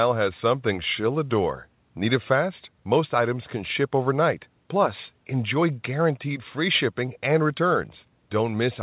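No technical faults are audible.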